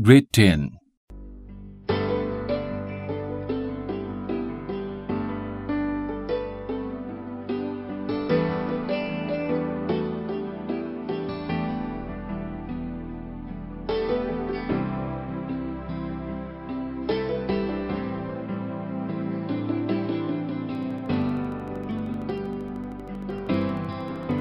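From 20.75 s right through to 24.40 s you get a train of clicks: evenly spaced pops at about 12.9 per second, so around fifty of them, each with much the same shape and peaking about as loud as the sound itself. It comes across as a steady ticking laid over everything, gaps included. Something outside the audio is likely firing a pulse into the chain, such as interference from nearby gear or a faulty connection or power supply.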